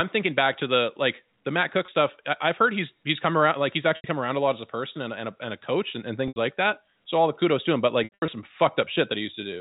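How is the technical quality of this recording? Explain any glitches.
The recording has four dropouts from packet loss with pitch repetition, carried over G.711 telephone coding that keeps everything below 4 kHz.

At 1.86 s (20 ms), 3.96–4.04 s (80 ms), 6.28–6.36 s (80 ms) and 8.04–8.28 s (180 ms lost across 240 ms, longest run 80 ms), packets went missing. The receiver repeated the last pitch period to fill each gap. The 20 ms gap sounds like a held, buzzy note. The longer ones fade to silence over about 50 ms, and the sound returns with a short cross-fade.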